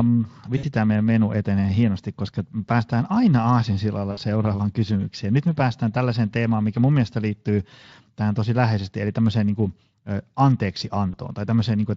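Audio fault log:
0.57–0.65 s, 4.11–4.19 s and 11.11–11.16 s, VoIP packet loss concealed by the speech codec: brief buzzy or noisy smears fade out, the first just before "tämä meidän menu etenee". The Speex decoder filled each missing stretch (about 60, 60 and 20 ms, consistent with three, three and one 20 ms frames) by repeating its last pitch and filter at falling gain.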